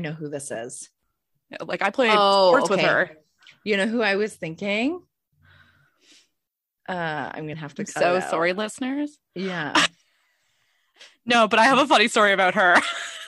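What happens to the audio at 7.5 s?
A stream segment skipped at about 7.53 s: the speech jumps abruptly forward, marked by a brief blip, as if a stretch of the talk is simply gone. The likely cause is that one chunk of a segmented stream failed to arrive or load, so the player abandoned it and carried on with the next segment. The audio on either side joins without any fade, which makes the cut audible.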